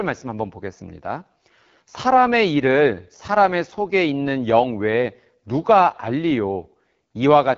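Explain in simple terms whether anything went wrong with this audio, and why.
The speech sounds rough and raspy from start to finish, because the AMR wideband (HD Voice) codec squeezed it very hard, rebuilding the voice from a simplified model.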